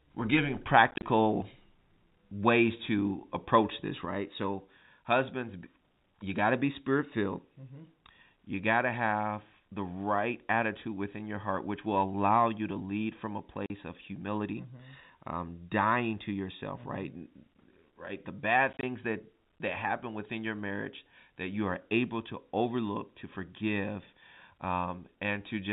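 Between 0.91 and 1.03 s the speech breaks into gaps: about 70 ms of sound goes silent, scattered across 120 ms, the longest hole 30 ms. The same hard-edged chopping returns as a single 40 ms hole at 13.66 s, then as 50 ms of gaps spread over 100 ms from 18.73 s, with the longest 20 ms. This is packet loss filled with silence. Lost packets were replaced with nothing, so each gap starts and stops abruptly, and the hole lengths fit 10 ms packets.

From 4.05 s to the end, the level falls abruptly by about 6 dB and stays down. The likely cause is one channel dropping out: with one side of the stereo pair gone, the mono sum keeps only half of what both channels shared. Through all of this the G.711 A-law telephone coding at 64 kbps holds the band below 4 kHz, with faint or no codec damage.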